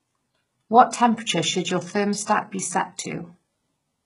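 Low-bitrate audio saved at a high bitrate runs throughout this speech clip: nothing sounds above 11.1 kHz, and earlier lossy-coding artefacts remain, consistent with HE-AAC near 12 kbit/s, likely re-encoded as 320 kbit/s MP3, which cannot restore discarded detail.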